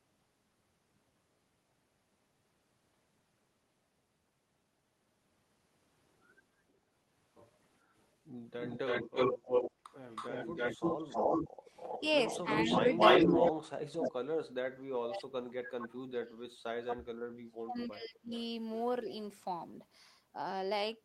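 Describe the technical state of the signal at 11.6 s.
At 11.6 s an echo leak runs from 10.12 to 13.52 s. A copy of the sound returns about 0.32 s late, a little louder than the original, likely from an echo canceller missing loudspeaker pickup.

Background gated by the echo canceller also lands here, from 11.49 to 11.66 s. The canceller ducked the microphone, dropping room sound by about 13 dB for roughly 150 ms.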